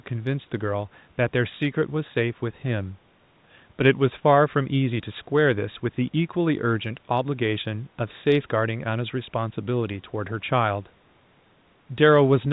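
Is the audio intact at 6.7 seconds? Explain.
Yes, the speech at 6.7 seconds is intact, with no dropout, click or other fault at that moment.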